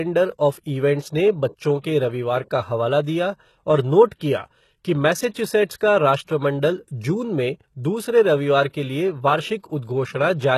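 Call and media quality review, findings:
Speech, whole clip: s sounds gritty and metallic, treble synthetic. Likely HE-AAC compression, consistent with a low bitrate around 16 kbps; upper band rebuilt by copying lower bands upward. Spectrogram: repeated, misaligned harmonic blocks above crossover, coarse smeared envelope, hard ceiling at 12.3 kHz with nothing above.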